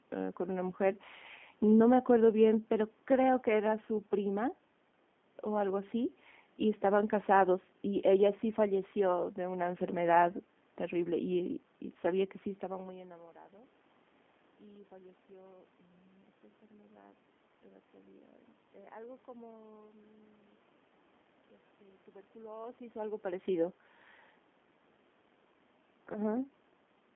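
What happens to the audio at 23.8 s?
The speech runs through the G.729 codec for the whole clip, including 23.8 s, rebuilt at 8 kbit/s from a vocal tract filter and sparse pulses, leaving it audibly rough, synthetic and band-limited to about 200 Hz–3.5 kHz.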